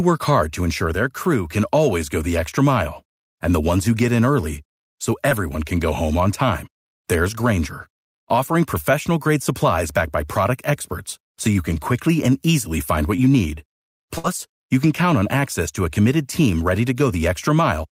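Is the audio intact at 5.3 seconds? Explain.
No. Between 5.29 and 5.33 s, just after "get in early so", short concealed packet loss leaves a brief smear: the receiver continued the preceding sound to cover about 13 ms of the 20 ms that never arrived. A spectrogram shows the continued sound blending back before "can go home on".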